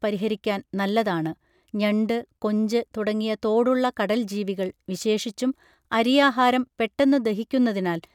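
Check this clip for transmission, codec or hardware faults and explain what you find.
No transmission, codec or hardware faults are audible here.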